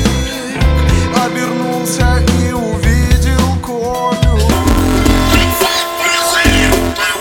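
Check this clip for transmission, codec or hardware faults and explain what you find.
One fault is present. Planar audio read as interleaved runs from 4.52 s to the end: stereo blocks of about 5.8 ms, consistent with 256-sample blocks, are misread, producing a robotic 172 Hz buzz without an octave shift.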